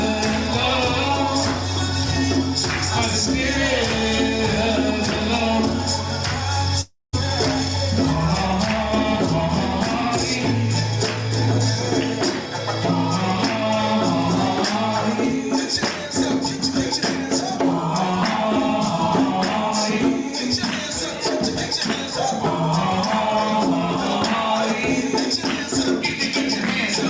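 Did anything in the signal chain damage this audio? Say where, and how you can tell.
Yes. From 6.81 to 7.15 s the sound breaks off: the last moment is stretched into a buzzy, fading tail lasting about 0.32 s, the final 0.19 s or so fall to silence, and the audio resumes with roughly 0.32 s of material simply gone. That pattern of the receiver filling the gap with a decaying continuation and then giving up points to a long network dropout as the likely cause, somewhere on a call path whose bandwidth stops at 8 kHz, consistent with G.722.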